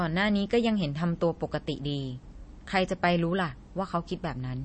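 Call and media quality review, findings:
MP3 compression, whole clip: speech sounds watery and swirly throughout, nothing above 8.3 kHz, sibilants dull and chirpy. Likely an MP3 encode starved for bits; the damage fits something around 32 kbps.

Mechanism, as far as I can tell: encoder chopped the top end at a fixed cut-off and dropped weak frequency lines that flicker frame to frame. Hence the warble and the smeared consonant edges.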